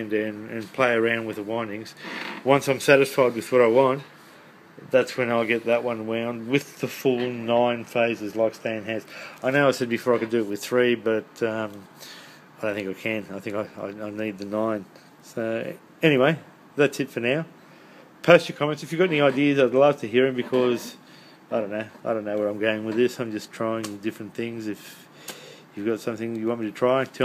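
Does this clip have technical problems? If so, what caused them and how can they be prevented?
No, there's nothing technically wrong to hear here, so there's nothing that needs preventing.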